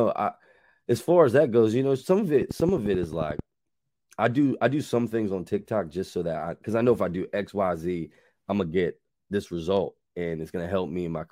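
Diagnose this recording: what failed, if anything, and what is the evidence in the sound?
Train of clicks from 2.42 to 3.40 s: around ten near-identical pulses at a steady 11.3 per second, peaking roughly 10 dB above the speech and audible in gaps too. The regular rate likely points to interference entering the analogue wiring or converter.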